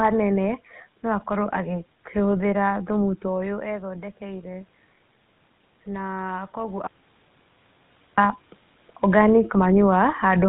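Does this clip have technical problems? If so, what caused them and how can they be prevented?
Yes. The GSM full-rate codec gives the speech a buzzy, gravelly roughness throughout, consistent with a 13 kbps stream; a spectrogram shows a hard ceiling at 4 kHz. Prevent this with a wideband codec such as AMR-WB or Opus.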